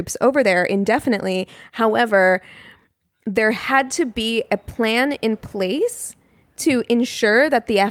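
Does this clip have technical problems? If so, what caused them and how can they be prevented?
No, there are no technical problems in this recording.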